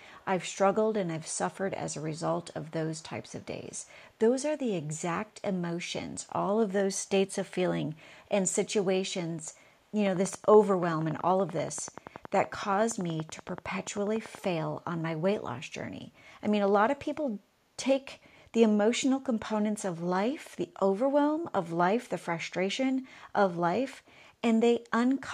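Speech with an echo leak near the start: a very faint copy of the voice trails it by 334 ms at 0.0–0.25, 2.14–2.21, 2.53–2.71, 2.94–3.03 and 3.22–3.87 s. That fixed, discrete delay sets it apart from room reverberation, and it is likely the far end's loudspeaker getting past its echo canceller. From 10.07 to 14.46 s, a train of clicks ticks at a steady 10.5 per second, about fifty alike pulses slightly louder than the speech. Their even pace and shape distinguish them from random crackle, and they likely come from nearby interference.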